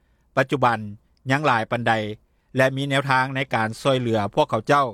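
No technical faults can be heard anywhere in this audio.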